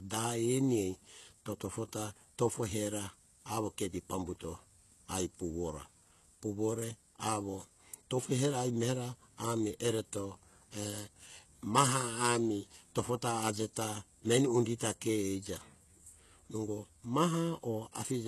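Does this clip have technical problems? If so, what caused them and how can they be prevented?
Yes. Throughout the speech the treble sounds bright yet synthetic, with s sounds turning gritty and lispy, and nothing above about 12.3 kHz. This is likely HE-AAC compression: the lower spectrum is coded, and the upper band is rebuilt by copying lower bands upward under a coarse envelope, so its harmonics don't line up with the real ones. The damage is plainly audible, which fits a very low bitrate around 16 kbps. A simple low-pass filter would sound dull rather than metallic. Encoding at a higher bitrate, or with plain AAC-LC where bandwidth allows, prevents it.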